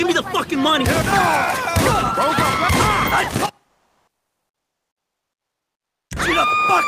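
From 3.67 s to 6.09 s, about 2.4 s, the background gives way to comfort noise. The real background detail vanishes. A steady, featureless hiss takes its place. Its level shifts by about 8 dB against the true background, which sits about 69 dB below the loudest passages. The sender likely stopped transmitting during the pause, as with Opus discontinuous transmission. The receiver then filled the gap with synthetic noise until the sound resumed.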